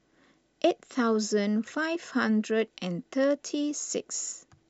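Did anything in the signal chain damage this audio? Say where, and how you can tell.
No, nothing in the chain audibly damaged this speech recording at any stage.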